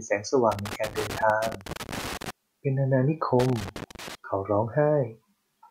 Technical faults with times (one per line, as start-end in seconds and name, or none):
0.52-2.30 loose connector crackle
3.39-4.15 loose connector crackle